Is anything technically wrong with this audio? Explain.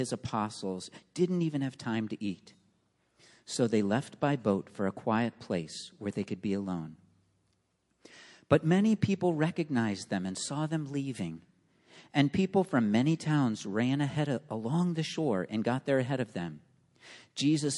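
Yes. Throughout the clip, the sound has a watery, swirling quality, dull treble, and smeared attacks. The likely cause is MP3 compression at a rate that fits about 48 kbps. Starved of bits, the encoder cuts the highs and drops weak frequency lines frame by frame.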